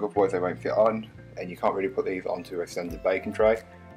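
Hard clipping appears at 0.19 s, from 0.80 to 0.86 s, at 1.66 s and at 3.47 s. Peaks exceed the limit by about 1, 2, 3 and 0 dB, and are sliced flat. Those flat tops add high harmonics, heard as brief crackles.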